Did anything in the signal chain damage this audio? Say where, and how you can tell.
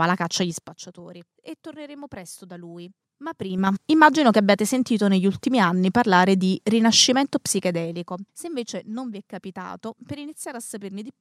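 Yes. Ticking zipper noise rides on the level moves at 0.43–0.85 s after "la caccia" (a drop of about 20 dB), 3.33–3.76 s before "immagino che abbiate sentito" (a rise of about 20 dB), and 7.51–8.45 s between "anni parlare di rinascimento" and "invece non vi è" (a drop of about 15 dB). The gain stage applied these changes unsmoothed, in 4 dB, 4 dB and 1 dB steps about ten times a second. Each jump clicks.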